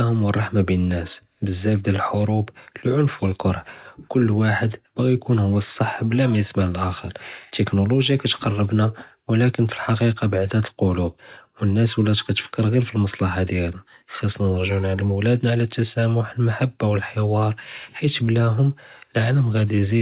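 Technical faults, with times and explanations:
Nothing stood out on listening to this speech clip, which comes through a normal call path with its sound topping out around 4 kHz.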